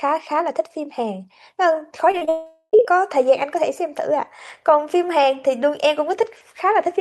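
Short concealed packet loss hits at 2.11–2.15, 2.17–2.23 and 2.25–2.29 s. Each gap was patched by extending the last sound, heard as brief smears. From 2.29 to 2.75 s the sound turns to a fading buzz, then short silence, and resumes with material missing: a long network dropout, likely.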